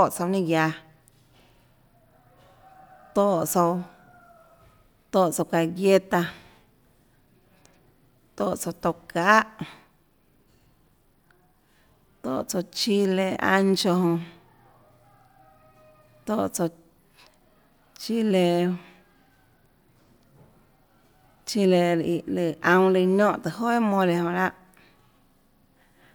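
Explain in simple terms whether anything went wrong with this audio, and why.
Nothing went wrong that could be heard; listening to this speech recording, nothing stood out as a problem.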